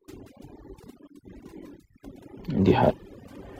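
Right from the start there's overdone noise removal on this speech: the noise reducer was pushed too hard, so it's clamping individual frequency bands whenever they drift near its noise estimate. The background drops and breaks up into little twinkly specks.

Then at about 2.90 to 2.94 s the sound jumps ahead with a small blip, most likely a stream segment skipped, where one chunk of the stream failed to load and the player carried on with the next one.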